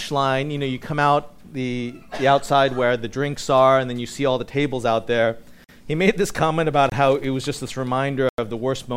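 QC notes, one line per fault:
5.64–5.69 s, 6.90–6.92 s and 8.29–8.38 s: blocks of digital silence, about 46, 23 and 93 ms long. The audio drops straight to silence and back with no fade. The lengths fit 2048-, 1024- and 4096-sample buffers left unfilled.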